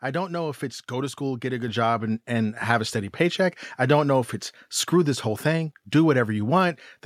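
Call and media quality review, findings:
Microphone volume stepped up at 1.68 s, between "school get a good" and "job and and": speech and background noise rise together by about 6 dB in one step. Component: call client's automatic input gain raising the device volume mid-utterance.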